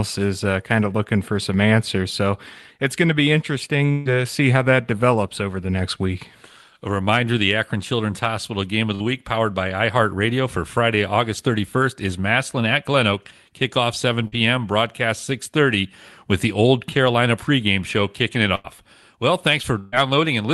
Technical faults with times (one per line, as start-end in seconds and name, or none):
3.91-4.08 burst of packet loss
8.95-9.03 burst of packet loss
14.27-14.35 burst of packet loss
18.55-18.67 burst of packet loss
19.79-19.96 burst of packet loss